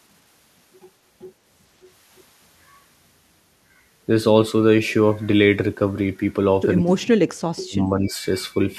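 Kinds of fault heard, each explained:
Speech suppressed in double talk: the speech gets pushed down hard in two short patches near the end, from 6.8 to 7.25 s, where it drops by something like 40 dB and nearly vanishes, and again from 7.67 to 8.19 s, a shallower dip of around 20 dB. The likely cause is an echo canceller that heard the far side talking at the same moment, couldn't separate the two, and turned the near talker down along with the echo.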